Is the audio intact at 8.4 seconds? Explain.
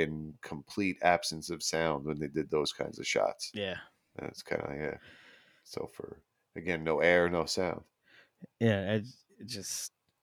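Yes, at 8.4 seconds the speech runs intact with no audible fault.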